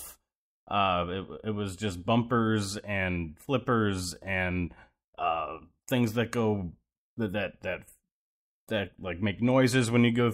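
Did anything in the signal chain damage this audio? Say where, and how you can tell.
No, nothing in the signal chain audibly damaged this speech recording. No stage between capture and playback leaves a mark that can be heard.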